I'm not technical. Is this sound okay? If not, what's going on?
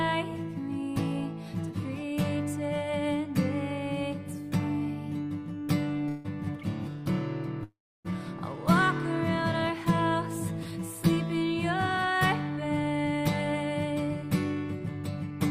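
No. Call audio freeze at 6.09 to 6.26 s and again at 7.64 to 8.12 s: the sound stalls into a short fading buzz, and the second stall drops into about 0.3 s of silence. The likely cause is delayed network packets. When they arrive, the sound picks up where it stopped, so nothing is lost but a pause is added.

Jitter buffer speed-up from 12.50 to 14.23 s: the receiver caught up on that delay by snipping out many tiny slices, roughly 0.15 s in total. The sound plays about 8% faster at the same pitch, so it feels slightly hurried.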